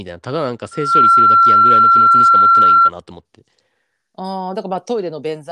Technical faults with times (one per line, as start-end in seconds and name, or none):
0.71-2.91 loudspeaker feedback squeal